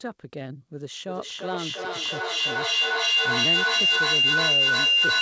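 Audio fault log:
0.99 s to the end, feedback howl: two devices on the call sharing a room feed each other, gaining level every pass. It narrows to a tone around 3 kHz, pulses roughly every 0.4 s, and peaks about 12 dB over the speech.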